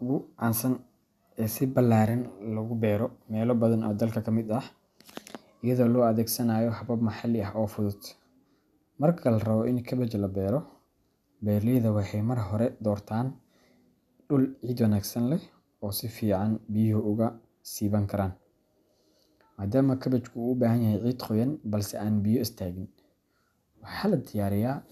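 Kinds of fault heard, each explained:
No technical faults can be heard anywhere in this speech recording, and the signal stays intact throughout.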